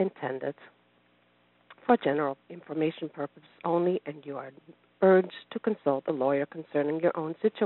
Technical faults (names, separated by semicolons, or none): none